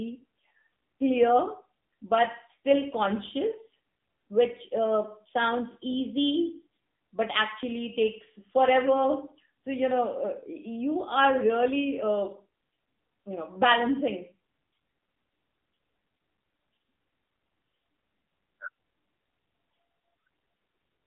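Throughout, AMR narrowband mobile codec damage is plainly audible: nothing passes above 3.8 kHz, and the buzzy, synthetic texture fits a low mode around 7.4 kbps.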